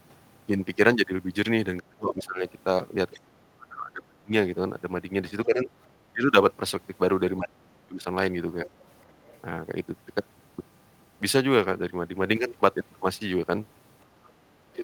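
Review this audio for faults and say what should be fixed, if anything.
Sample clock jitter runs through the whole clip as a fine hiss and roughness that sits on the speech, growing on loud and bright passages and falling away in pauses. The likely cause is an unstable converter clock, off by a few microseconds, so each sample lands slightly early or late. The resulting error scales with how steeply the waveform is changing and sits roughly 35 dB below the signal. To prevent it, clock the converter from a clean, low-jitter reference.

Speech suppressed in double talk shows up as the talker's level sinking, thinning or breaking apart at 1.79 to 2.43 s, 3.13 to 4.33 s, 5.46 to 5.69 s, 6.13 to 6.23 s and 7.38 to 8.06 s. The first two dips are very deep, and the later ones are shallower. The likely cause is an echo canceller that could not separate the local talker from loudspeaker echo while both sides spoke, so it attenuated everything. 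To prevent it, use an echo canceller with proper double-talk detection that holds back its suppression when the near end is active.

Other side's voice leaking through is heard as faint scraps of a second voice at 8.66 to 9.06 s, 9.26 to 9.40 s and 14.24 to 14.29 s. They sit well under the main speech, from about 20 to 35 dB below it. The likely cause is residual loudspeaker echo that the canceller failed to remove from the microphone feed. To prevent it, improve echo-path modelling and residual suppression, or have the far end played on headphones.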